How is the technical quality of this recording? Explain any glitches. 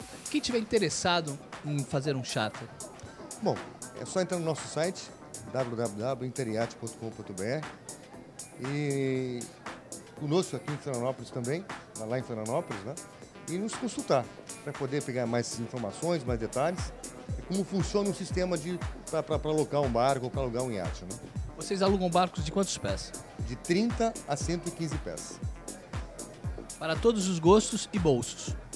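No glitches or technical faults turn up anywhere in the recording.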